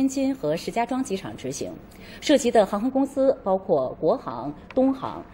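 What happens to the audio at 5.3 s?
At 5.3 s the sound is dull and muffled, its treble rolled away, as it has been since 2.90 s through to the end. This is de-emphasis applied wrongly: a treble cut meant to undo pre-emphasis that was never there or was applied twice, sloping smoothly down to about 14 dB below 1 kHz by 10 kHz.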